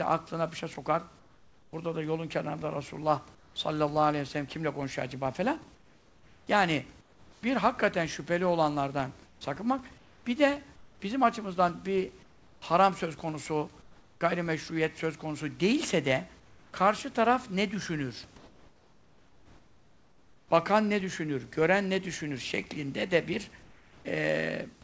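Chunks out of order occur at 0.74 to 0.76 s, just after "aklına bir şey". A 10 ms piece of audio arrived one chunk late and plays after the piece that should follow it. Nothing is missing, but the swapped sequence produces a brief jumbled flick.

Comfort noise in place of the background appears at 1.19 to 1.73 s, 3.35 to 3.56 s, 5.75 to 7.43 s, 9.26 to 14.21 s, 16.40 to 16.73 s (between "söz konusu değilse de" and "karşı taraf ne düşünür"), 18.38 to 20.51 s (after "karşı taraf ne düşünür") and 23.63 to 24.05 s. In these pauses the room's real background gives way to a steady, featureless hiss, in most of them about 3 to 5 dB quieter. The likely cause is that the sender stopped transmitting during silence and the receiver filled the gap with synthetic noise. The whole clip has nothing above 8 kHz, which fits the G.722 call codec at 64 kbps.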